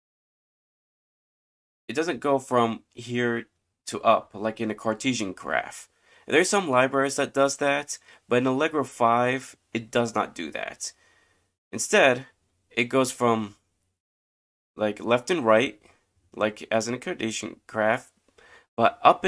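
The speech recording has no audible technical faults anywhere in its duration.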